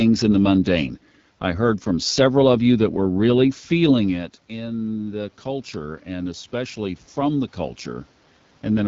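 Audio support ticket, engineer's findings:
AMR wideband (HD Voice) codec, whole clip: rough, raspy speech throughout, plainly audible coding damage. Sounds like a low AMR-WB mode, which fits roughly 8.85 kbit/s. At that rate the pulse-excited vocal tract model runs short of bits, so the excitation gets coarse and buzzy. Nothing above 7.5 kHz. The top band is just shaped noise filling in. Probable component: the codec itself.

Automatic gain rising, 4.05 to 7.58 s: level swells by about 7 dB over three and a half seconds. Voice and room noise come up together, which gives it away as gain and not the talker. The trigger was a drop of about 13 dB at the mic around 4 s, when the talker moved back. AGC saw a quiet input and ramped gain up slowly to compensate. Probable component: AGC stage.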